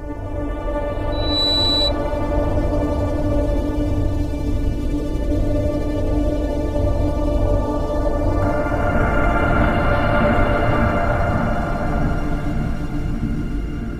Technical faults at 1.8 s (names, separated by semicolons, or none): loudspeaker feedback squeal